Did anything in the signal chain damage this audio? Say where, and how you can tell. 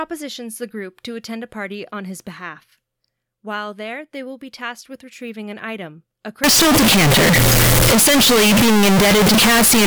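Yes. From 6.44 s to 9.87 s, right after "retrieving an item a", the waveform turns nearly square at an almost fixed high level, background noise rises to match the speech, and pitch stays traceable. This fits a float read as integer at the sample-format conversion stage, likely 32-bit float data taken as 32-bit integers, so sign and exponent bits set each value.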